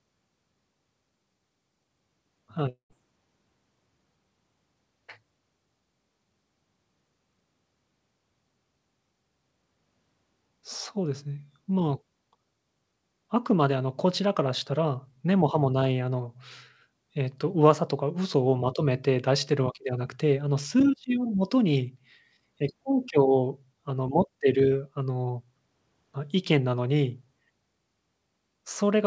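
From 2.69 to 2.93 s, a long network dropout likely starved the receiver of packets: the speech smears into a fading buzz, then about 110 ms of silence.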